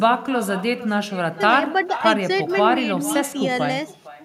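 Echo with no canceller runs through the whole clip: the far end's loudspeaker feeds the microphone and nothing subtracts it, so the speech returns about half a second later, about 15 dB down, as a thinner shadow trailing each phrase.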